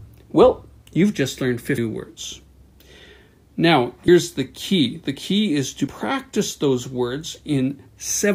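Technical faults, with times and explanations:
1.78 s, 4.08 s and 5.87 s: compressed frames skipped. Each time the sound jumps ahead by a few 32 ms frames, losing about 0.3 s, then 0.15 s, then 0.1 s.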